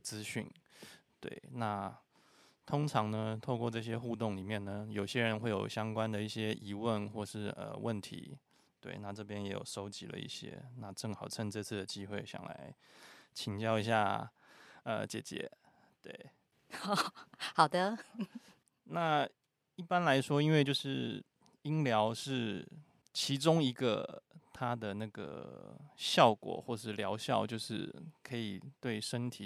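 A speech recording, and nothing is technically wrong with it.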